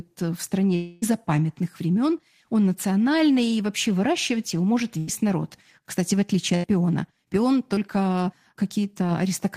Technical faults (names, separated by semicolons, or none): long network dropout; burst of packet loss; short concealed packet loss